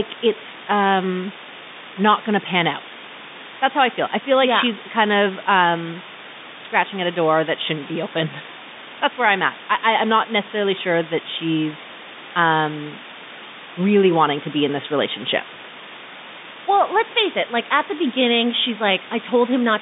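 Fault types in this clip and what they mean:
Low bit depth with dither: the speech is carried by so few amplitude steps, which fits a 5-bit word length, that rounding error would be gross, but dither added before rounding turns that error into a steady, even white hiss with no harmonic distortion. Here the hiss runs through the whole clip at roughly ten decibels below the speech, so it is loud and constant, and it is heard within the narrow telephone band that the G.711 line passes.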